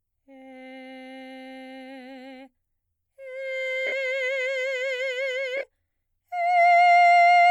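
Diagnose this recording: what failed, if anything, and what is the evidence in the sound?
Lost LE Audio frames at the codec/Bluetooth link stage: at 3.87–3.92 s the music blurs into a noisy smear for about 52 ms. From 5.57 to 5.63 s, 30 ms of brief dropouts smear it again. The LC3 decoder concealed the gaps by replaying the last spectrum with randomised signs. On a spectrogram, sharp harmonics dissolve into diffuse broadband texture, not a blank gap.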